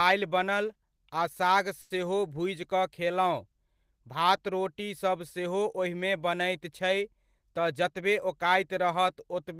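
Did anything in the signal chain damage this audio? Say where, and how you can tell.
Yes. A short stall from a late packet in the network jitter buffer: at 1.81 to 1.92 s a sound is held 90 ms, then resumes intact, unlike loss concealment, which drops audio.

A jitter buffer speed-up from 7.47 to 8.94 s: speech runs about 107% fast at unchanged pitch, trimming roughly a tenth of a second, unlike resampling, which raises pitch.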